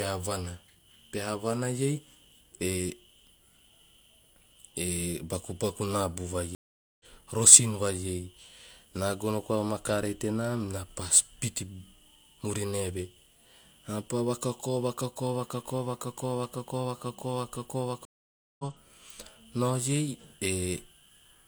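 At 6.55 to 7.05 s and again at 18.05 to 18.64 s the speech drops out in a stream reconnect. After gaps of 0.45 s and 0.54 s, a fresh decoder resumes roughly 0.3 s further along, so material is skipped, and it fades in.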